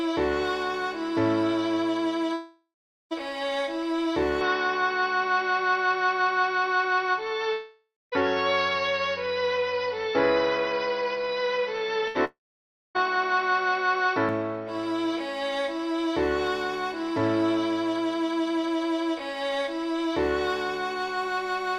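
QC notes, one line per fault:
2.33–3.13 s, long network dropout: a fading buzz or hiss, then about 0.4 s of silence. About 0.78 s of audio is skipped, likely from a stall in packet arrival.
4.41–14.29 s, input switched to a poorer device: the sound turns dull with no gap or level jump. Nothing passes above 6 kHz, and a new noise floor sits about 35 dB under the signal, likely a change to a narrower-band microphone.
7.53–8.14 s, long network dropout: the held sound fades, leaving about 0.21 s of silence. About 0.6 s is missing when playback resumes, likely from interrupted delivery.
12.08 s, burst of packet loss: a brief held sound decays as about 80 ms drops out. Playback then jumps ahead past the missing stretch.
12.25–12.97 s, long network dropout: a short fading tail gives way to about 0.57 s of silence. Roughly 0.7 s never plays, likely a second outage right after the burst.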